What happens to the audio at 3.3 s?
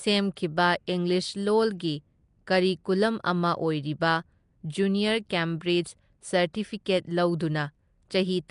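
At 3.3 s, as throughout, the speech has a rough, hissy, underwater smear and nothing above 10.6 kHz, likely Nellymoser compression filling starved bands with noise, consistent with roughly 44 kbps.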